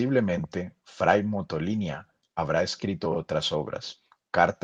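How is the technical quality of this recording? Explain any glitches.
One brief glitch stands out, heard over call-codec audio whose highs stop around 12 kHz. From 2.57 to 2.59 s, just before "escrito otras", a rough, noisy 20 ms patch appears. This is a lost packet rebuilt from error correction: the next packet's low-bitrate copy filled the gap, which fits a single lost packet.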